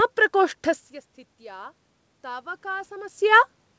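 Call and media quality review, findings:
Automatic gain rising, 1.23–3.22 s: voice and room noise swell together by about 4 dB. AGC chasing an input drop of about 21 dB, probably the talker pulling back, ramping gain up slowly. Band tops out at 8 kHz, consistent with a G.722 call path.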